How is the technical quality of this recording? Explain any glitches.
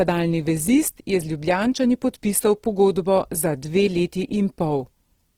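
The quality is noticeably degraded, with plainly audible codec damage running through the entire recording.

Throughout, the speech sounds rough, grainy and noisy, even though the full bandwidth is kept. The likely cause is Opus compression in its music (CELT) mode at a low rate, around 16 kbps. Short of bits, the encoder preserves each band's energy but fills in detail with folded lower bands or noise.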